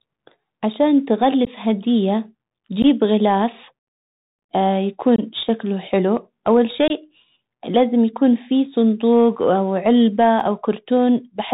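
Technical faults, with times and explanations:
Throughout: Bluetooth CVSD headset codec. The speech is narrowband and muffled, with scratchy s sounds, a granular hiss underneath, and distortion on loud bright sounds. A one-bit-per-sample coder running at 64 kHz cannot pass anything above 4 kHz, and its adaptive step cannot keep up with fast, loud changes.
1.45, 2.82, 5.16–5.20 and 6.88–6.91: unconcealed Bluetooth headset packet loss. Each is a brief abrupt hole, 15 ms for the first two and 22.5 ms for the others. The last two sit just before and just after "شكله حلو اول". Voice packets between headset and phone were lost, and nothing filled the gap.
10.16–10.65: CD scratch ticks. Three tiny regular ticks, each well under a millisecond, come just after "يكون في صندوق او". A blemish on the disc destroyed more data than error correction could rebuild once per revolution, so the player briefly interpolated or muted the damaged samples.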